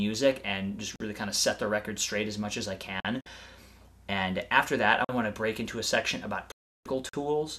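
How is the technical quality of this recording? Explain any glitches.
The recording has two kinds of interruption: regular chunk gaps and two broadcast dropouts.

Gap between chunks: 44 ms silences at 0.96, 3.00, 5.05 and 7.09 s, one at each join of 2-second chunks.

Digital broadcast dropout: the sound mutes with a roughly 3 ms fade at 3.21 to 3.26 s and again at 6.52 to 6.86 s, about 336 ms. The receiver silenced frames it lost or that failed their check, so that audio is lost.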